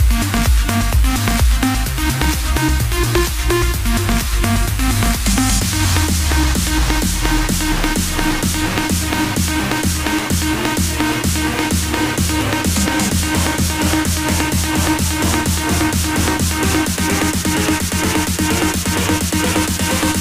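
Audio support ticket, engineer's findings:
Had a listen and nothing's wrong on my end, so no findings to log for this one.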